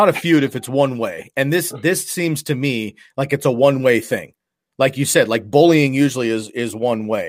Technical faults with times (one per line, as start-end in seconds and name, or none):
none